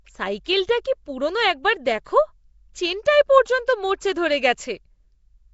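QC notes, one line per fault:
Throughout, Nellymoser compression, likely the cause: the speech has a rough, grainy hiss clinging to it and a smeared, underwater feel, and nothing comes through above about 7.7 kHz. That's what you get from a block codec working on short chunks with a fixed, small bit budget. Quieter bands get starved of bits and are patched with noise, hence the hissy halo. At around 32 kbps the damage is plainly audible.
0.45 s, pre-echo: there's a brief hiss of about 15 ms smeared just ahead of a sharp onset, so the attack sounds soft rather than crisp. The codec spreads its quantisation noise across the whole block, and when a loud hit lands late in that block, the noise sized for the loud part leaks into the quiet stretch before it. You hear the smear arrive slightly before the sound itself.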